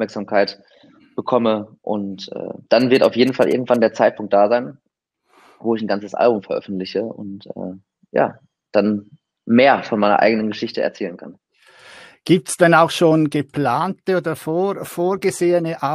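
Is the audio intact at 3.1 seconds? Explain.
No. From 2.80 to 3.76 s the audio carries GSM signalling bursts: a nearby 2G phone exchanging short radio bursts with the network, which the audio circuitry rectifies into sound. It comes through as a galloping dit-dit-dit of brief buzzes at a 216.7 Hz burst rate, roughly 20 dB below the wanted audio. Unlike steady mains hum or the continuous buzz of an active call, it arrives in clustered, stuttering groups.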